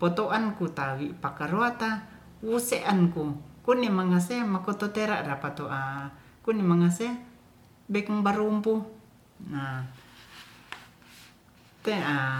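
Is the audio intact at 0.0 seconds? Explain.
Yes, the audio is intact at 0.0 seconds, with no fault present at that moment.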